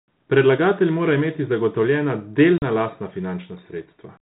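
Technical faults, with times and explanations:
2.58–2.63 s, packet loss on an ADPCM call: about 40 ms of the speech drops out into a hard-edged hole of silence, roughly two packets' worth on this 32 kbit/s G.726 line. Because ADPCM sends only differences from a running prediction, the receiving decoder's predictor and step size lose track of the sender's during the gap, so the audio coming back in right after the hole is briefly misjudged until the two sides pull back into step.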